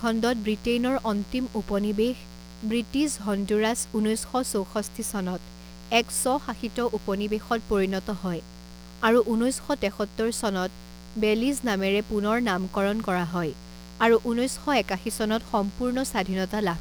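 From the first second to the end, a mains buzz sits under the speech, roughly 20 dB below it. Its fundamental is 60 Hz, and the rasp comes from a dense stack of harmonics climbing into the kilohertz range. That spectrum points to sharp current spikes from switching or rectification, coupled into the signal path through poor shielding or grounding on each half of the mains cycle. It is a constant, gritty buzz, not a smooth hum.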